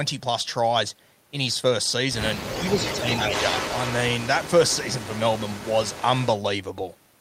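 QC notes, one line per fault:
2.42–4.51 s and 4.67–6.27 s, echo leak: A delayed copy of the speech trails the original by about 285 ms, then about 287 ms. In the first stretch the copy is strong, only about 5 dB below the speech. In the second it is much fainter, about 15 dB down. The steady delay gives a distinct repeat of the voice. The likely cause is a far-end loudspeaker whose echo canceller let part of its microphone pickup through and sent it back.
2.55–3.32 s, speech suppressed in double talk: The speech dips by about 5 dB in short pieces, roughly a third of a second in all. This happens while the echo is also playing. The level pumps down and back up, so the speech sounds briefly pushed away. This is likely an echo canceller that could not tell its own talker from the loudspeaker echo during overlap, so it turned both down.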